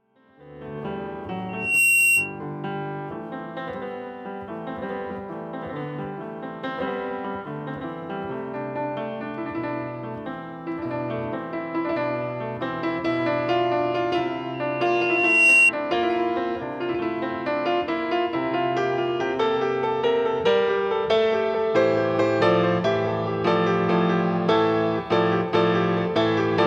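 Loudspeaker feedback squeal at 1.49–2.40 s and 14.54–15.72 s: microphone-to-speaker loop gain exceeds one at 2.7 kHz, which swells quickly, then over about a second and louder.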